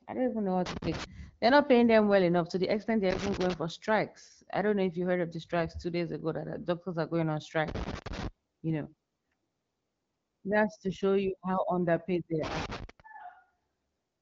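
Loose connector crackle breaks into the speech four times. The first burst runs from 0.66 to 1.04 s, just after "don't even know what". The next is 3.10 to 3.54 s, between "enough to the extent" and "for strikes I don't". Another is 7.68 to 8.28 s. The last is 12.44 to 13.00 s, after "you how underpaid they". A worn contact is making and breaking, chopping the signal. Each burst sounds like irregular scratchy crackle, over the wideband HD Voice bandwidth.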